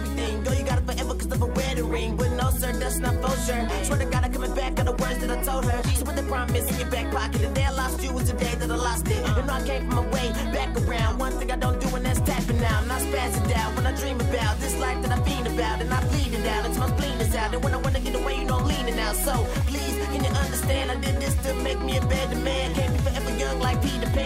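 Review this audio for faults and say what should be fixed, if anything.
No faults were heard; nothing needs fixing.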